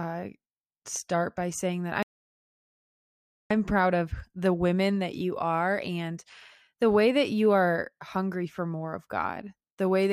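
An audio dropout to silence runs from 2.03 to 3.51 s, right after "start by saying that", with the speech resuming abruptly at "proud of the women". For about 1.48 s the signal falls to silence, with no room tone or noise floor underneath, which is likely an input loss such as a disconnected source or a momentary mute while recording carried on. Whatever was spoken in that span is simply missing.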